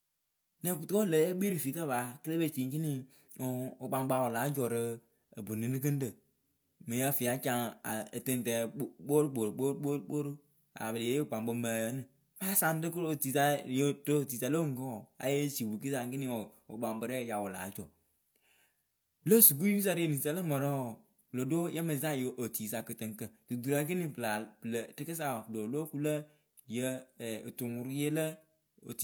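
Nothing technical is wrong with this speech recording; there's no fault to point to anywhere in it.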